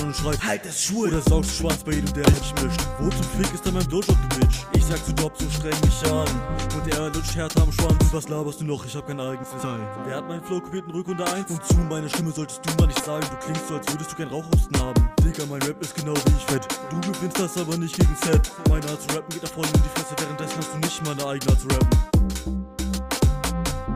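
Frames out of order at 2.25–2.44 s, 9.43–9.63 s and 12.95–13.08 s: two adjacent blocks of about 80 ms each (40 ms in the last) swap places, so a garbled flutter plays, with no time lost.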